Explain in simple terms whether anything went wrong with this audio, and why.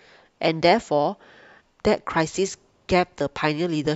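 Nothing went wrong here.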